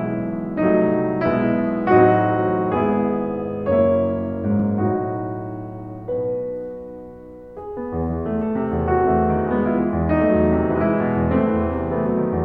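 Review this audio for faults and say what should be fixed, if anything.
A single loud pop sits on the music from 4.60 to 4.62 s, a sharp transient peaking a few decibels above the surrounding level while the music carries on underneath without interruption. A pop like this is likely an electrical step or pulse, such as a connector being seated, a switch changing state or a static discharge, entering the signal path. The downstream circuitry shapes that pulse into a brief thump. To prevent it, make connections and switch changes with the chain muted and keep equipment properly grounded.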